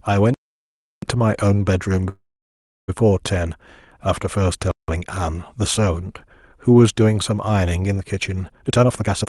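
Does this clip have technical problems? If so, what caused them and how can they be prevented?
Yes, a few. Two blocks of digital silence hit at 0.34 to 1.02 s and 4.71 to 4.88 s. The sound drops straight to silence and back for about 0.68 s and 0.17 s. Those lengths fit 16384- and 4096-sample blocks that never got filled in time. Giving the audio thread bigger buffers and real-time priority should stop it.

From 2.09 to 2.90 s there's a call audio freeze. The last sound trails off into a fade and then sits silent for roughly 0.67 s before picking up where it left off, so a gap of about 0.79 s gets added but nothing is lost. It's likely that delayed packets ran the jitter buffer empty. Better network QoS or a deeper jitter buffer would help.

At 8.62 to 9.27 s the jitter buffer speed-up kicks in. The audio runs at about 159% speed with the pitch unchanged, and it sounds hurried. The receiver is trimming repeated pitch-period slices, around 0.4 s in total, to drain excess buffered delay after late packets arrive in a clump. 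Steadier packet delivery would prevent that build-up.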